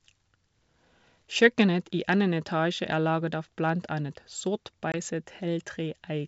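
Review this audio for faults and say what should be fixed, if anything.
Packet loss on an ADPCM call at 4.92–4.95 s, right after "av blant annet sort": about 20 ms of audio, roughly a couple of packets, drops to a hard-edged silence. The decoder's predictor and step size lose track of the sender's, so the speech comes back slightly distorted before settling. Packet loss concealment, plus resetting the ADPCM decoder state to match the sender, would smooth this over.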